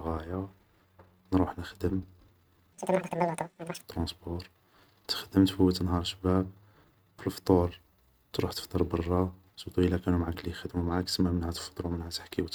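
A section at the wrong speed runs from 2.73 to 3.83 s, where the speech plays at twice its recorded speed and rises by around ten semitones, sounding hurried and squeaky before snapping back. Likely cause: that stretch was played out against the wrong clock.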